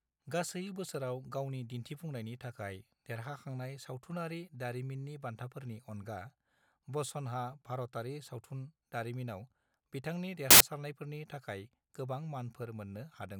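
A burst of loud, harsh broadband noise fills the speech from 10.51 to 10.61 s: samples built from the wrong bytes, with fast-changing low bits misread as each value's large part.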